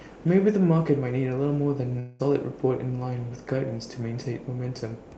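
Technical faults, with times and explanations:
1.99–2.21 s, long network dropout: for about 0.2 s the speech turns into a buzzy, smeared continuation of the last sound that thins out but never reaches silence, and then the speech resumes with that stretch simply gone. The likely cause is packets ceasing to arrive, with the receiver's concealment filling the whole gap. A brief packet loss would be covered too quickly to hear. Here the fill lasts long enough to audibly fade, and the lost material is skipped rather than delayed.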